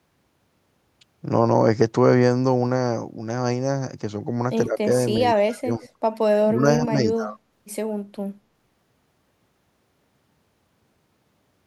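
The speech dips sharply in short bursts at 4.65 to 4.81 s, 5.36 to 5.86 s, 6.41 to 6.63 s and 6.79 to 7.4 s, falling as much as roughly 25 dB at its deepest. This is speech suppressed in double talk. The echo canceller likely could not tell this talker apart from loudspeaker echo while both sides spoke, so it turned the speech down. Right at the end of the second dip, from 5.85 to 5.89 s, a faint, brief copy of the voice trails about 104 ms behind, roughly 30 dB below the speech. This is echo leak, likely the far side's echo canceller letting a scrap of its loudspeaker pickup return down the line.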